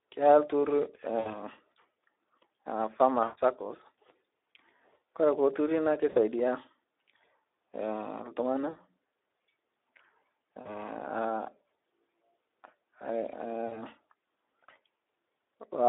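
Speex codec damage runs through the whole speech recording. At about 11 kbps the coder has few bits for the excitation, so the voice sounds hoarse and noisy, confined to a 300 to 3700 Hz telephone band with nothing above. VoIP packet loss concealed by the speech codec occurs at 1.19–1.41, 3.23–3.38, 6.09–6.18, 8.69–8.79, 10.61–10.70 and 13.67–13.84 s. Gaps of 40 to 140 ms, consistent with 20 ms frames, were filled by extrapolating from the last pitch and filter with fading gain, and the voice stays degraded briefly afterwards.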